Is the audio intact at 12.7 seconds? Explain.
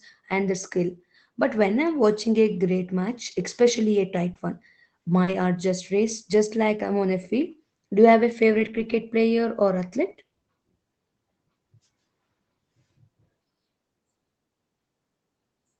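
Yes, the speech is intact at 12.7 seconds, with no dropout, glitch or other fault at that point.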